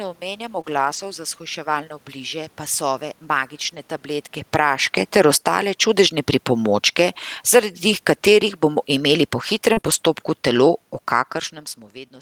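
Between 0.61 and 0.65 s there is a brief smear where the sound is stretched over a small gap. This is short concealed packet loss: about 20 ms never arrived in time, and the receiver extended the preceding sound to cover it before blending back. Straight after, from 0.65 to 0.99 s, and again from 3.65 to 3.79 s, the audio turns grainy and noisier without any gap. That is a lost packet rebuilt from error correction: several lost packets, 180 ms and then 80 ms of sound, were replaced by the low-bitrate backup copies carried in the packets that followed them.

From 4.40 to 5.62 s the level sinks by about 10 dB, with voice and background dropping together. This is automatic gain falling, where the gain control judged the input too loud and eased its gain down. Overlapping it, from 4.66 to 6.43 s, automatic gain rising lifts the whole sound back up by about 5 dB as the control reacts to the quieter input. 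This happens near the talker's shift in distance around 4 s. From 6.52 to 11.14 s the level slides down again by about 5 dB under automatic gain falling, while the talker moves once more near 11 s.

At 8.13 to 8.15 s a single 20 ms stretch briefly roughens, another lost packet rebuilt from error correction. Around 9.73 to 9.96 s, losses cluster. Short concealed packet loss smears the sound from 9.73 to 9.79 s and again from 9.81 to 9.86 s, and the rough, noisy texture of rebuilt frames sits at 9.77 to 9.79 s and 9.86 to 9.96 s.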